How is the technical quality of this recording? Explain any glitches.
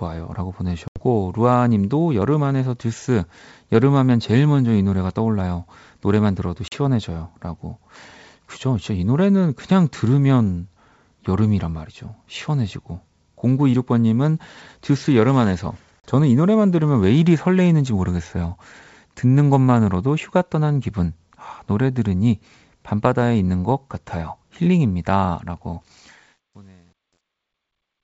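The recording has two kinds of fault: three dropouts from packet loss on an ADPCM call, and truncation distortion on the closing fade. The G.722 wideband telephone coding keeps the speech clear and wide in bandwidth.

Packet loss on an ADPCM call occurs at 0.88 to 1.04 s, with about 80 ms missing, and at 6.68 to 6.73 s and 16.00 to 16.04 s, each with about 40 ms missing. These losses point to a few packets at the first gap and a couple at each later one. The missing audio was replaced by silence. The decoder's adaptive predictor and step size then no longer matched the sender's. Each gap sounds like an abrupt hole. The speech comes back slightly distorted, then settles over some tens of milliseconds.

Truncation distortion on a fade begins at 25.83 s and lasts until the end of the clip. It is worst from 26.35 s onward, as the smooth fade-out from about 26 s to 28 s drops toward silence. 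The fade was computed at only 10 bits with no dither, so the quietest part of the waveform collapses into a few coarse square steps. The tail sounds gritty instead of fading away cleanly.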